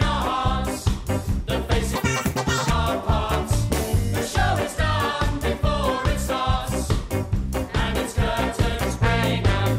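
From 1.95 to 2.70 s the sound jumps to double speed, an octave higher: audio read two samples at a time, as if mono were taken for two channels.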